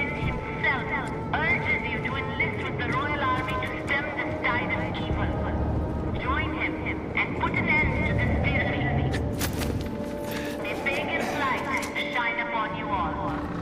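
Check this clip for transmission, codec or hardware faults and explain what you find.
Two brief disturbances show frames out of order, at 6.13 to 6.20 s and 8.61 to 8.71 s. Neighbouring blocks of about 30 ms and 40 ms, which fits runs of three and four frames, were decoded swapped. Each plays as a garbled flutter. A spectrogram would show abrupt vertical discontinuities at the three joins, and the waveform would show the same step changes there, with no gap and no lost time.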